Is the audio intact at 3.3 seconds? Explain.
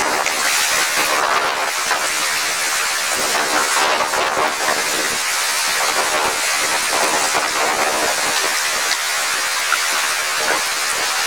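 No. At 3.3 s the audio suffers from planar audio read as interleaved, a fault present throughout the clip. Each 26.12 ms block stores all left samples followed by all right samples, but playback takes them as alternating pairs, so every block plays twice at double speed, first its left half and then its right. The sound is shifted up an octave (12 semitones) and carries a rough buzzing flutter at the 38.3 Hz block rate, while the overall pace stays correct.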